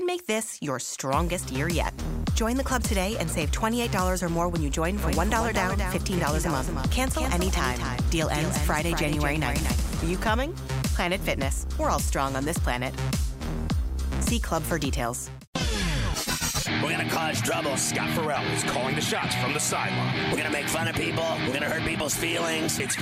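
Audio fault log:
5.03–10.27 s doubled audio track: a dry copy about 5 dB quieter lags about 200 ms behind and cuts in and out abruptly, likely from a second, slower capture path.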